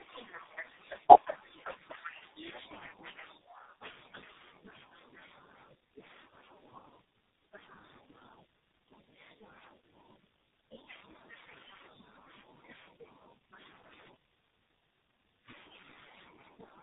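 Throughout, the speech shows tandem speech coding: two low-rate speech codecs in a row, likely an AMR-NB stage then G.723.1, the second re-encoding the first's damage. Unlike a single codec, the roughness, muffling and warble compound, with nothing above 3.8 kHz.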